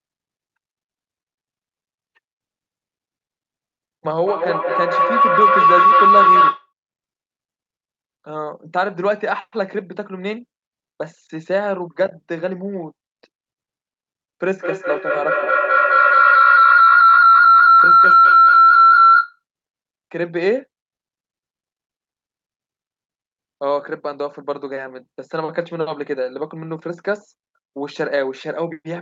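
From 4.23 to 6.73 s and 14.61 to 19.43 s, feedback howl swells: a loop between two devices gains level each pass, narrowing to a tone near 1 kHz, then near 1.5 kHz, about 9 and 10 dB above the speech. Unlike echo, its repeats, roughly a fifth of a second apart, grow rather than fade.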